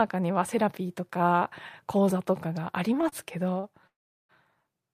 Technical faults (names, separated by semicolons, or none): short stall from a late packet; call audio freeze